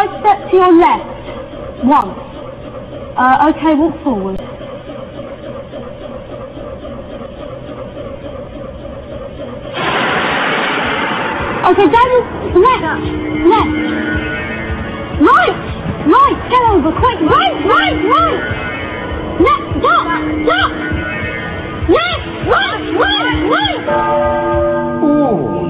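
The sound drops out flat at 2.01 s and 4.37–4.39 s: an underrun with held sample, losing about 10 and 20 ms of live audio.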